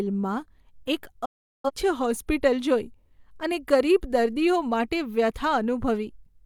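At 1.25 s a digital broadcast dropout mutes the speech. The receiver stopped getting valid frames, faded to silence within 8 ms, and resumed at 1.71 s, with 384 ms of programme lost. The waveform flattens to silence, and the spectrogram shows an empty band across all frequencies.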